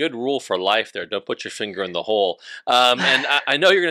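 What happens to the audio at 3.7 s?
At 3.7 s the speech still crackles on its louder peaks, right at the end of a stretch of hard clipping that runs from 2.72 to 3.71 s, just after "finger in the hole". The signal there is driven roughly 5 dB beyond what the stage can pass, so each peak is sliced flat, and those squared-off tops add harmonics high up the spectrum that produce the gritty edge.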